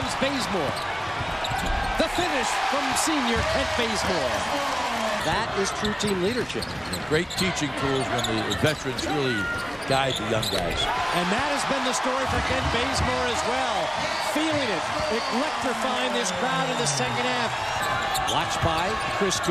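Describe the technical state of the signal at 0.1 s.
At 0.1 s the signal is intact, with no audible technical fault at that moment.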